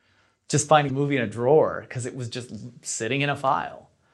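A short speech recording with one fault: damaged data in a compressed stream, heard from 0.85 to 0.90 s as a brief disturbance of about 50 ms. At that point some bytes in the encoded stream were corrupted, so the decoder could not read the affected frames correctly, lost frame sync and had to hunt for the next valid header before clean playback resumed.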